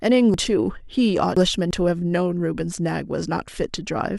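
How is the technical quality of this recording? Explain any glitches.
The recording has one glitch, chunks out of order, from 0.34 to 1.71 s. A 0.34 s chunk arrived three chunks late, so the following three play first and it lands at 1.37 s. Nothing is lost, but the speech there sounds jumbled, with hard joins at 0.34, 1.37 and 1.71 s.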